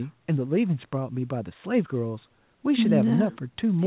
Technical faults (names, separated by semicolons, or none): none